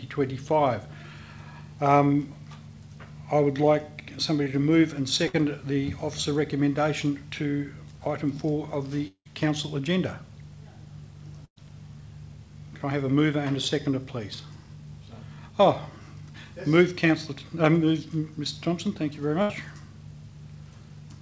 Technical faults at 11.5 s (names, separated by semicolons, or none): burst of packet loss